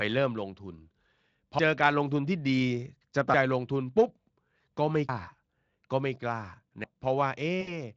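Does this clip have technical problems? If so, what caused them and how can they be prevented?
Yes. Audible skips at 1.59, 3.34, 5.09 and 6.84 s are likely audio missing between chunks. The recording seems to run in 2-second blocks, and about 0.3 s is dropped at each handover, so the jumps fall every 1.75 s of playback. The two sides are butted together without a gap, so the speech lurches forward. On a waveform, each join is a sudden discontinuity. On a spectrogram, it is a thin vertical line where harmonics break off and restart out of step. Prevent it by double-buffering the capture, so the next chunk is already recording before the previous one closes.

From 7.61 to 7.72 s there is VoIP packet loss concealed by the speech codec. About 60 ms of audio went missing, which fits three 20 ms frames. The Speex decoder, whose coding damage is light, filled the hole by repeating its last pitch and filter settings at falling gain. 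This produces a brief buzzy tone or coloured noise that fades, and the speech stays weak for a moment after real data returns. A spectrogram shows flat, smeared harmonics thinning into noise, and the waveform shows a decaying periodic stretch. Prevent it with a larger jitter buffer, forward error correction or a more stable network path.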